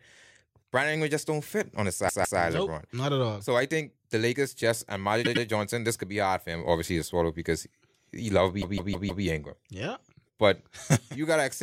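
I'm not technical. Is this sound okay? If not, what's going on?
No. This speech has repeated frames at 2.08 to 2.39 s, 5.24 to 5.45 s and 8.61 to 9.24 s. The stored audio comes in small chunks, and at each spot a short stretch was saved or sent more than once, so the player replays it. That makes a stutter. A 0.16 s piece plays three times at 2.08 s, a 0.1 s piece three times at 5.24 s, and a 0.16 s piece five times at 8.61 s, adding roughly 1.1 s overall.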